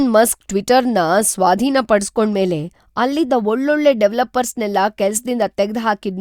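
No technical faults can be heard anywhere in the speech recording, with the signal holding steady and intact throughout.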